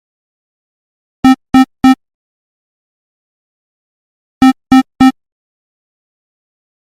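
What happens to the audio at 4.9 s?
Just before that point, from 4.83 to 4.86 s, there is short concealed packet loss. About 20 ms of audio never arrived in time, so the receiver extended the preceding sound to cover the gap and crossfaded back into the real signal. It is heard as a brief smear or wobble.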